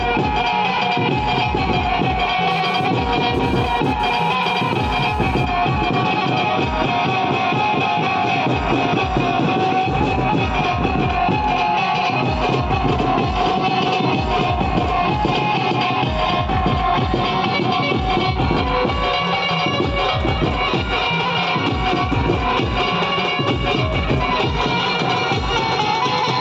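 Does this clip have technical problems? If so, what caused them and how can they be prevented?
Yes, there's a burst of GSM phone buzz from 2.51 to 5.45 s, a hard, raspy buzz at about 217 Hz, full of harmonics and unrelated to the sound itself, sitting about 21 dB below it. A 2G phone nearby was moving data, transmitting in pulses 217 times a second, and the audio circuitry rectified those radio pulses into audible sound. That's why it shows up as a short patch. Keep phones away from the recording chain, or switched to airplane mode.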